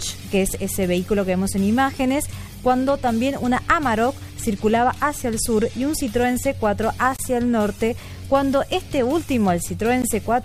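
Gaps at a join of encoded pieces open at 7.16 to 7.19 s and at 10.02 s. Leftover encoder delay and padding leave 24 and 15 ms silences.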